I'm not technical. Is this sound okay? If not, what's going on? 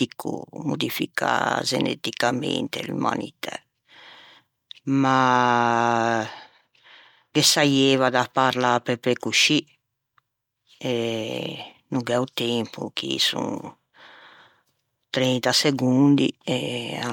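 Yes, the recording is technically sound, with nothing going wrong in the signal at any point you would need to worry about.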